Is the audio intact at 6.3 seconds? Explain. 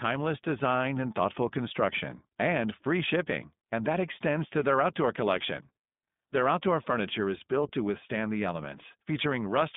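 No. At 6.32 s there are lost iLBC frames: a gap that fits a single 20 ms frame, which the decoder fills by repeating the last pitch cycle mixed with noise, heard as a brief held, buzzy or breathy vowel before the signal recovers almost immediately. Underneath, the iLBC codec is plainly audible throughout, consistent with the 15.2 kbps mode. It codes each 20 ms frame independently and limits the band to 150 Hz to 3.6 kHz, giving a rough, synthetic narrowband quality.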